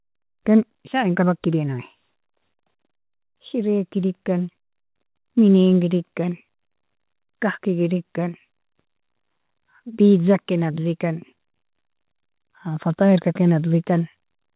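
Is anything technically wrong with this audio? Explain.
No, nothing here is wrong; the speech simply carries the narrow telephone-band sound of a call path, with nothing above 4 kHz, which fits a G.711 A-law connection.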